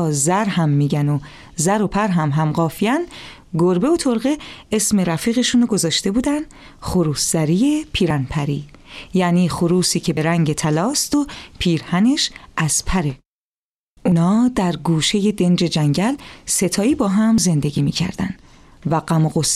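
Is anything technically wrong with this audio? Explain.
Yes. There are five small jumps in the sound, at 8.10, 10.17, 11.13, 14.12 and 17.38 seconds. Each is a skip with no gap. A short stretch of audio is simply missing, and the two sides are butted together. At 8.10, 10.17 and 14.12 the loss is roughly 40 ms. At 11.13 and 17.38 it is about 10 ms. The likely cause is a dropped buffer (overrun), where samples were overwritten before the program could collect them.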